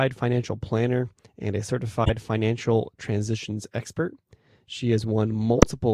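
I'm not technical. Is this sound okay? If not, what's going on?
No. At about 2.04 to 2.11 s and again at 5.57 to 5.63 s there is a corrupt frame decoded: a few damaged chunks of compressed speech were played back anyway, scattering sound to the wrong pitches. Each is a brief, harsh chirp or burst of noise.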